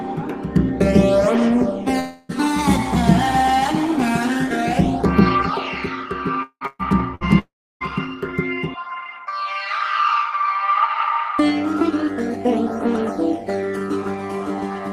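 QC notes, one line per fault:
1.99 to 2.32 s: long network dropout, likely. About 300 ms of audio is missing, and the receiver fills nearly the whole gap by extending the last sound. That fill is heard as a held buzz or hiss that fades, and it does not drop to silence before the audio resumes. The signal then comes back further on, without the portion that was lost.
6.43 to 6.64 s: long network dropout, likely. About 180 ms is missing. The concealment holds and fades the preceding sound, then leaves about 60 ms of near-silence before playback picks up again further along.
6.67 to 6.82 s: burst of packet loss. About 120 ms of audio did not arrive in time. The receiver extends the last sound and turns it down across the gap, which gives a brief fading buzz or hiss, with about 10 ms of silence at the end. The audio resumes with the intervening part gone.
7.15 to 7.24 s: burst of packet loss. 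This is a shorter gap, about 60 ms, concealed the same way as a quick fading hold of the prior sound. It is heard as a small hitch where a piece is skipped.
7.39 to 7.84 s: long network dropout, likely. About 420 ms is missing. The fading continuation of the last sound lasts only briefly, and about 320 ms of silence or low steady noise follows before the audio returns further on. This is the longest gap. It comes close after the two packet-loss bursts, so the stretch from 6.4 to 7.8 s sounds repeatedly broken.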